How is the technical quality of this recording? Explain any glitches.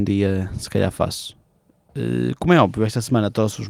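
No glitches or faults heard.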